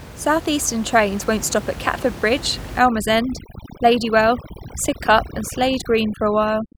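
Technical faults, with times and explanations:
2.79 to 6.77 s, overdone noise removal. From here to the end, a noise reduction stage is working far too hard. The room noise sits only about 14 dB below the speech, so much of the quieter speech falls close to the noise estimate. Those frequency bands get pulled right down or switched off. The background drops and breaks up into twinkling specks, and softer parts of the voice are stripped away with it.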